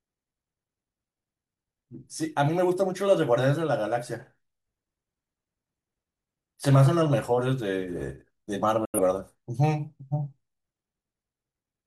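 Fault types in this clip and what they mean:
Digital broadcast dropout: The receiver muted when frames went bad. The speech fades out within 3 ms at 8.85 s and returns at 8.99 s. That stretch is lost.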